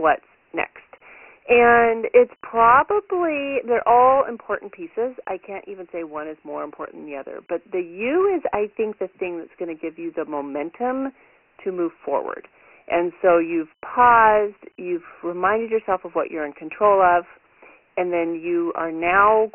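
From start to finish the speech sounds thin, boxed-in and gritty, with a coarse hiss riding on every syllable and nothing above 3 kHz. This is heavy Dialogic VOX ADPCM damage: coarse 4-bit steps at a rate that fits 6,000 samples a second, squeezed into a 300–3,600 Hz telephone band.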